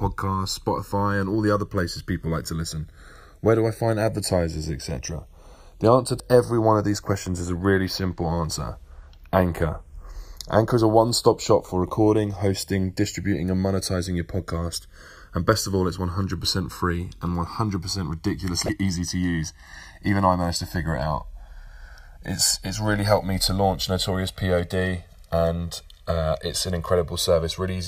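Throughout the speech, the channels drift apart because they run on separate clocks roughly 100 ppm apart. The inter-channel delay reaches around 2 ms, so a mono sum gives slow flanging. At 6.17–6.20 s and 18.65–18.69 s, damaged data in the compressed stream makes the decoder lose frame sync and resynchronise, producing short glitches.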